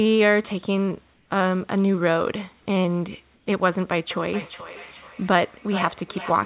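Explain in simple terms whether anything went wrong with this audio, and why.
A couple of things went wrong here.

Around 1.14 to 1.30 s and again from 3.34 to 3.46 s, the quiet gaps between phrases lose their natural room sound. It's replaced by a flat, smooth hiss that's a touch quieter. That's comfort noise in place of the background. The likely cause is that the sending side stopped transmitting during the pauses to save data, so the receiving end filled each gap with a made-up noise that only roughly matches the real room.

From 4.11 s right to the end, there's a feedback echo between two devices. Two phones or laptops in the same room are probably on the call, and one is playing back what the other's microphone picked up. That mic hears it again and sends it round once more. So everything repeats roughly every 0.4 seconds, thinner and more ringing each time. It sits a fair way under the main speech.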